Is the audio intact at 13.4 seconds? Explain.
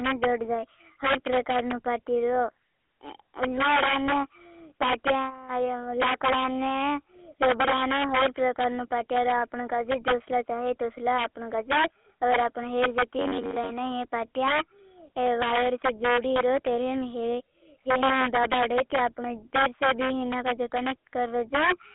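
No. Robotic sound from repeated short buffers runs from 13.19 to 13.70 s: audio likely arrived too seldom, so a fragment of roughly 10.7 ms was replayed in place of about half the real signal, forcing a rigid, metallic 93.8 Hz buzz. Integer overflow is also present at that moment: peaks pushed about 7 dB past the limit wrap to the opposite sign, giving violent cracks on a small share of loud samples. The GSM full-rate codec, too, confines the sound to 300 Hz to 3.5 kHz with a buzzy, gravelly roughness that fits a 13 kbps GSM stream.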